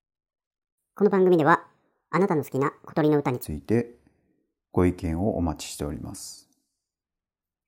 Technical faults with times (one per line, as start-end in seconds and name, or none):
0.00-3.43 section at the wrong speed